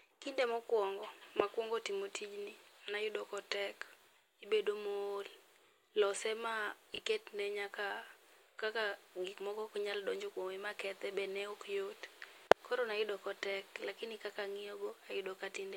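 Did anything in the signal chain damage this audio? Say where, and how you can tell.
Yes. At 6.94 to 6.98 s, about 40 ms of the speech comes out jumbled because of chunks out of order at the buffer or packet-handling stage. A 20 ms chunk arrived one chunk late and plays after the chunk that should follow it. Nothing is missing, but the swap leaves three hard joins. On a waveform these show as abrupt level and slope jumps, and on a spectrogram as thin vertical broadband lines with a reshuffled pattern between them.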